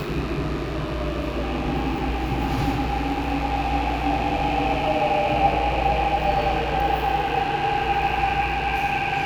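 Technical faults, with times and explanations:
Throughout, mains buzz: steady, raspy 50 Hz buzz about 15 dB below the sound, where switching spikes twice per cycle spray harmonics up to several kilohertz.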